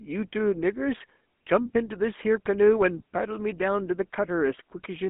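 Throughout, GSM full-rate codec coding makes the speech buzzy and gravelly; on a spectrogram, energy sits within 200 Hz to 3.4 kHz and stops entirely above 3.8 kHz.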